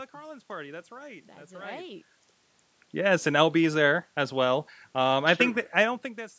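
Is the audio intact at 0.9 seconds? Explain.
Yes, the audio is intact at 0.9 seconds, with no fault at that moment.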